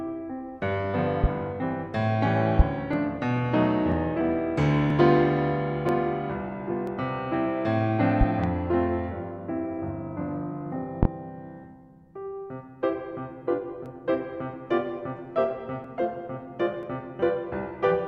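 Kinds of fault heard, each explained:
Loud pop: at 1.24, 2.59, 8.21 to 8.48 (a double pop) and 11.03 s, sharp thumps land roughly 15 to 25 dB above the music, which carries on underneath. The likely cause is a sudden voltage pulse from a plug, switch, static or driver glitch.
Overlap between stream segments: at 2.93, 3.92, 4.90, 5.89, 6.87, 13.86, 15.84 and 16.83 s, tiny skips come from a few milliseconds of music being cut where segment timestamps overlap. Their one-second spacing points to one-second stream segments.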